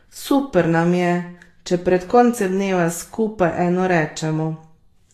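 Throughout the speech, the treble sounds grainy and hissy, consonant attacks are blurred, and nothing is present above 14.1 kHz. This is likely Vorbis compression at low quality, consistent with about 31 kbps: the codec cuts the top band and quantises remaining high detail into noise.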